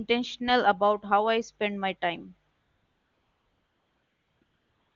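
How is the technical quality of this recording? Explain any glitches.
The recording has one recurring glitch, AMR comfort noise, heard over the wideband phone coding (clear, which fits a high AMR-WB rate). After "I spend my time", from 2.51 to 4.41 s and again from 4.43 s to the end, the phone judged the line silent and stopped sending speech frames. The receiver substituted smooth synthetic hiss, so the real background is lost. On a spectrogram this shows as a flat, featureless noise band that switches on abruptly, with a flat waveform envelope.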